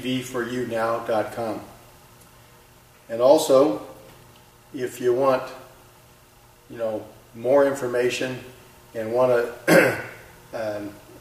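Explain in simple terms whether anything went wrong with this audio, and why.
Nothing went wrong here: the sound is intact all the way through, with no dropouts, glitches or odd changes anywhere along the way.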